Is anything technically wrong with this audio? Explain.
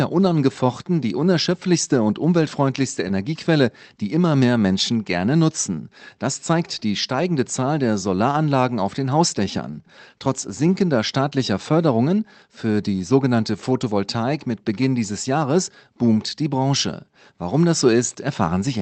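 Yes. The speech shows clock drift between sender and receiver throughout. The sender's clock runs about 3 percent slow, so audio arrives more slowly than the receiver plays it out and the jitter buffer keeps draining. Unlike a steady wrong sample rate, which shifts pitch evenly, or packet loss, which leaves isolated gaps, this drift produces a stream of small, unevenly spaced timing hiccups with no pitch change. It comes through a call path that cuts the top end off around 8 kHz.

Repeated timing corrections run from 0.33 s to 18.79 s. To keep from running dry, the receiver repeatedly stretches or duplicates short pieces, always in the same direction, so the speech plays at roughly 98 percent speed and accumulates about half a second of extra length. Each correction is tiny, heard as a slight stumble or uneven tempo rather than a dropout. Wow or flutter would sweep pitch, but here the pitch stays put.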